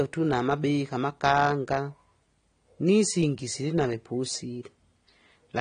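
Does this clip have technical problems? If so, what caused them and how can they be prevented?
Yes. Throughout, nothing sounds above about 9.7 kHz and sibilants carry a warbly, fizzy smear, likely from AAC compression at a low bitrate near 32 kbps, where spectral holes and coarse quantisation distinguish it from a clean low-pass filter. Encode at 96 kbps or higher.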